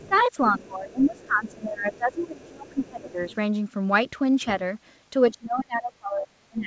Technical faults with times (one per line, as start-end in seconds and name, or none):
0.00-3.33 speech suppressed in double talk
0.02-0.51 other side's voice leaking through
1.17-1.52 other side's voice leaking through
1.94-3.35 other side's voice leaking through
5.30-6.67 speech suppressed in double talk